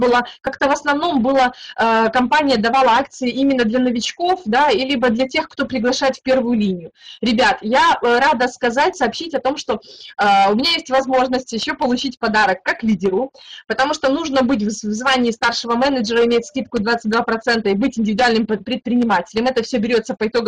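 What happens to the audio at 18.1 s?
Nothing goes wrong at 18.1 s; the audio plays through that moment intact, with no dropout, glitch or other fault.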